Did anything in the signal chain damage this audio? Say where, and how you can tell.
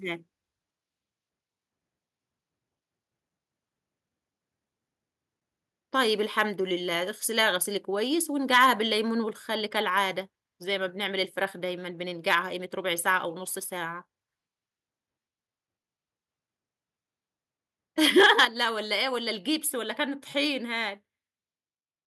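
Yes. The damage most likely starts at the microphone and converter stage, where the input volume was set too high and the loudest peaks hit the converter's ceiling. This microphone overload appears at 6.39 to 6.42 s, 8.53 to 8.71 s, 12.3 to 12.35 s and 18.05 to 18.45 s, with peaks driven about 2 to 4 dB past full scale. The flattened tops give those syllables a harsh, crackly edge, though only a small fraction of samples is actually clipped.

In the call processing, the software's automatic input control probably reacted to the hot signal by cutting the device's microphone volume in single steps. This microphone volume stepped down event shows as an abrupt level drop of about 1 dB at 6.27 s and a much bigger drop of about 6 dB at 18.45 s. The second step comes right as the longest overload run ends, so the voice and the background both fall together at once rather than fading.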